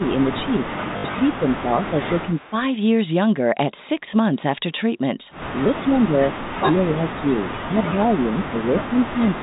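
A phone-band speech recording, with nothing above 4 kHz in the usual G.711 way, where the talker keeps getting pushed down by what sounds like speech suppressed in double talk, most likely an echo canceller ducking both sides while the far end talks. It drops by about 10 dB from the start to 2.56 s, about 15 dB from 5.64 to 6.31 s, about 25 dB from 6.5 to 7.44 s, and about 20 dB from 7.65 s to the end. Around 0.98 to 1.14 s there's packet loss with the last packet repeated: 80 ms missing across 160 ms, longest gap 60 ms, which fits 20 ms packets. You hear a short robotic stutter and a 50 Hz buzz. At 2.34 to 2.5 s a faint echo leak comes back roughly 269 ms late and about 30 dB under the voice, likely from a loudspeaker echo the canceller didn't fully remove.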